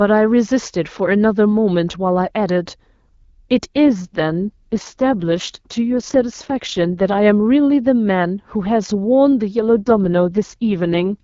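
At 3.74 s and again at 9.75 s the AMR wideband codec is pushed down to a lower mode, an AMR rate drop, with fewer bits left for coding the speech. The speech turns rough and raspy, with a synthetic buzz, a change that fits a step from 12.65 to 6.6 kbit/s. The band stays the same and there is no gap. Clear HD Voice returns at 7.19 s, and the second drop lasts until 11.23 s.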